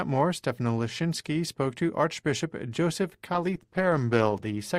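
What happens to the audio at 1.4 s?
Nothing goes wrong at 1.4 s; the audio plays through that moment intact, with no dropout, click, glitch or other fault.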